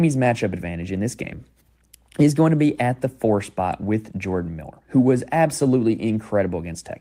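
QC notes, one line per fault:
Nothing stood out on listening to the speech in this clip.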